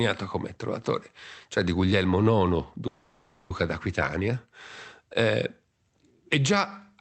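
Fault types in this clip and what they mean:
call audio freeze: at 2.87–3.53 s the sound stalls into a fading fill, likely delayed packets; unlike a dropout, nothing is lost, just postponed.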